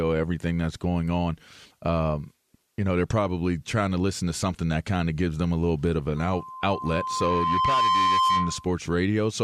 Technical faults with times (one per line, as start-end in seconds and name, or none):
6.17-8.76 loudspeaker feedback squeal